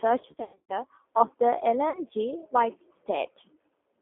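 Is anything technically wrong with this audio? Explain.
Yes. Throughout, the speech carries plainly audible G.729 codec damage. At 8 kbit/s this low-rate codec rebuilds each 10 ms frame from a vocal-tract filter, a pitch predictor and a few pulses, so the speech sounds rough and synthetic. The line band runs from about 250 Hz to 3.5 kHz. On a spectrogram nothing shows above 3.5 kHz, and the harmonics look smeared.

From 0.33 to 0.73 s, just before "of the", there is VoIP packet loss concealed by the speech codec. About 270 ms of audio is missing, scattered over 360 ms, with the longest gap lasting 100 ms. The decoder fills each gap by repeating its last pitch and filter at falling gain, which gives buzzy, fading tones. A spectrogram shows flat, stretched harmonic bands, and the waveform sags in amplitude.

At 1.9 to 2.0 s, right after "of the", a shorter 40 ms loss is concealed the same way. 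It leaves a brief buzzy smear and a dip in the waveform envelope before the signal recovers.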